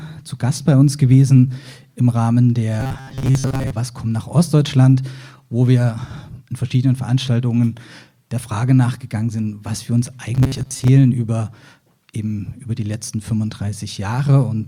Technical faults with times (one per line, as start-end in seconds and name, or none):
2.80-3.73 robotic sound from repeated short buffers
10.34-10.89 robotic sound from repeated short buffers